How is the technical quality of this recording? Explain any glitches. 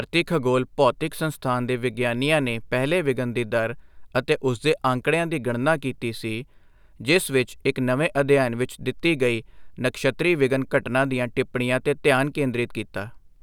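No glitches or faults are audible.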